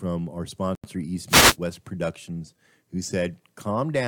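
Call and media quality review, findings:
Bluetooth stall, 0.75 to 0.84 s. Speech cuts to silence for 85 ms, then resumes. Likely cause is the wireless headphone link. Radio interference delayed packets, so the headset's playback buffer emptied before resent data arrived. Output stops dead rather than fading, then continues once the buffer refills.

Wireless microphone noise hit, 1.28 to 1.57 s. A burst of static swish over the speech, roughly 0.3 s long. Source is the analogue FM radio mic path. Multipath reflections cancelled the received signal, causing a fade. Receiver noise rose as signal strength dropped and masked the speech until the carrier recovered.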